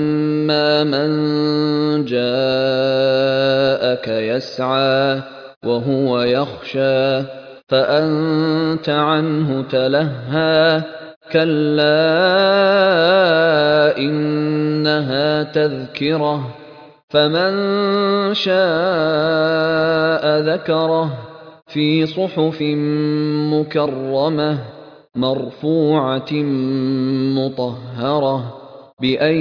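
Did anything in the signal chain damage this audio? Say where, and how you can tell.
No, nothing in the signal chain damaged this audio; there is no point anywhere in it where a stage can be heard doing harm.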